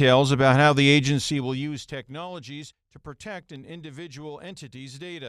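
From 1.05 to 2.23 s, just after "about how the", there is zipper noise. The level falls by roughly 20 dB, but in coarse steps rather than a smooth ramp. There are about 30 steps per second. Each step leaves a tiny click, so a fast ticking rides on the speech while the level moves.

At 3.56 s, after "to protect", and again at 4.74 s, a single sharp click stands out. Each is likely dropped samples. A fraction of a millisecond of signal goes missing, so the waveform jumps abruptly. Nothing audible is lost. Only a brief tick remains.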